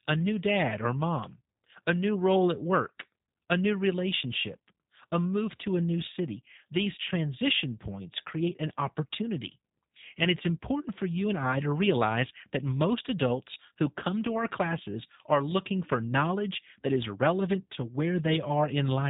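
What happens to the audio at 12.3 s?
At 12.3 s the speech is still passing through the G.729 codec, which runs across the whole clip. The sound points to a low-rate stream of about 8 kbit/s that rebuilds each short frame from a vocal-tract filter, a pitch predictor and a few coded pulses instead of the original waveform. The result here is a band cut off near 3.8 kHz, giving a muffled, telephone-like tone, with a plainly audible rough, synthetic buzz on the speech.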